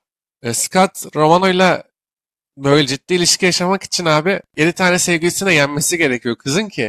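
From 4.35 to 6.35 s a faint, regular ticking sits under the speech, well down at about 45 dB below it. This is Wi-Fi interference: a nearby Wi-Fi radio's beacon transmissions are picked up and rectified by the audio circuitry, giving one click every 102.4 ms, just under ten per second. That steady clock-like spacing separates it from mobile-phone buzz, which comes as a rapid chattering pulse train, and from mains hum, which is a continuous tone.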